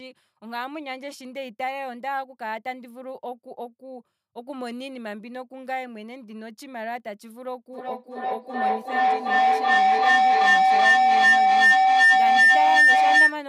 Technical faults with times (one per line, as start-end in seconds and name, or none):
7.73-13.46 feedback howl